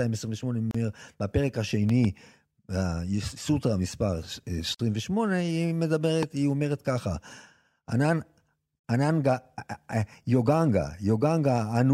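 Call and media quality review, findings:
Short dropouts in continuous speech with smeared edges, at 0.71–0.75 s (34 ms) and 4.75–4.79 s (49 ms), 4.0 s apart. Gap at a join of encoded pieces: separately encoded segments concatenated untrimmed, with the encoder start delay and last-frame padding left in at each seam.

Loud pop: a sharp double pop at 1.89–2.07 s and a single pop at 6.23–6.25 s, around 10 dB above the speech, which continues underneath. Probable component is a plug, switch, static discharge or driver glitch, likely injecting a voltage step that downstream circuitry shapes into a click.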